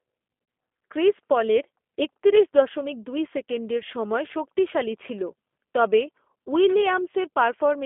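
Speech runs narrow, rough and faintly synthetic throughout, confined to roughly 250 Hz to 3.5 kHz with nothing above. That is the sound of the G.729 codec at plainly audible strength, rebuilding the voice from a filter, pitch predictor and sparse pulses, consistent with an 8 kbit/s G.729A link.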